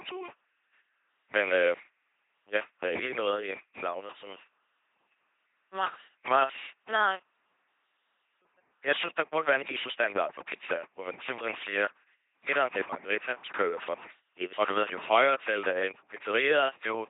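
This is speech, and it has passed through an LPC-10 vocoder from start to finish. The damage is heavy. The voice is rebuilt by a small all-pole filter that stands in for the vocal tract. A pulse train or noise drives that filter. Each moment is forced to be fully voiced or fully unvoiced. The result is a buzzing, mechanical robot voice. Nothing is heard above 3.8 kHz. This fits a 2.4 kbit/s vocoder.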